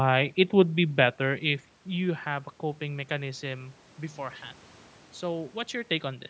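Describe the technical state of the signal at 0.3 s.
At 0.3 s the signal is intact, with no technical fault present, only the room's own background noise and the normal low-cut of the call's microphone processing.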